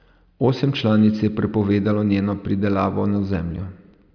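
No technical faults can be heard anywhere in this speech recording, and the signal holds steady throughout.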